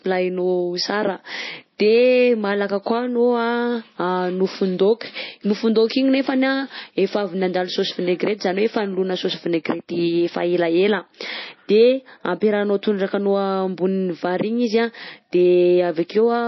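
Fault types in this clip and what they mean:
MP3 compression: the speech has no content above about 5.8 kHz and a plainly audible watery, swirling texture throughout, as weak frequency lines drop in and out between frames and s sounds turn metallic, likely from MP3 encoding at a low rate such as 24 kbps.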